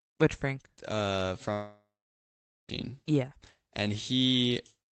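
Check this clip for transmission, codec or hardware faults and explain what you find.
One transmission fault stands out: a long network dropout in the speech from 1.53 s to 2.71 s. Throughout, the call codec's band limit shows as little energy above 8 kHz.

From 1.53 s, the last sound carries on as a smeared buzz that fades, then gives way to near-silence for roughly 0.84 s before speech resumes at 2.71 s with about 1.16 s missing. The likely cause is packets lost in transit, with the receiver's concealment stretching the final frame until it runs out. On a spectrogram, harmonics blur into flat horizontal streaks that dim into an empty gap. The waveform shows a decaying tail, then a flat line.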